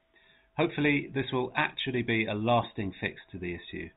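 Nothing goes wrong anywhere in this speech clip, which just has the narrow sound of G.711 telephone coding with nothing above 4 kHz.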